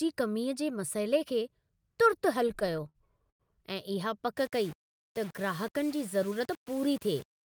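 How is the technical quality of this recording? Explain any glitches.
Three separate problems show up in this speech clip, all from about 2.4 s on.

From 2.43 to 3.42 s there are repeated stalls (stutter). The jitter buffer ran dry twelve times, and each time the receiver stretched the last sound to fill in, about 241 ms altogether, with the longest hold near 100 ms. Nothing's lost, but the speech drags and hiccups.

From 4.38 s to the end the audio turns gritty and grainy, with quiet parts breaking up. That's likely low bit depth without dither. It sounds like about 6 bits with plain rounding, so the error follows the signal and sits roughly 25 dB below it.

Between 6.31 and 6.66 s there's a jitter buffer speed-up. The buffer had built up extra delay, so the receiver trimmed out small pitch-period chunks, around 50 ms in total. The speech runs at 110% speed with unchanged pitch, so it sounds briefly rushed.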